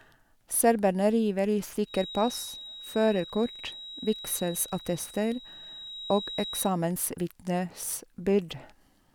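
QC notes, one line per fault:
1.83–6.75 s, feedback whistle: a thin, steady 3.8 kHz tone wavers faintly beneath the speech, roughly 15 dB down, likely a speaker-to-mic loop held just short of runaway.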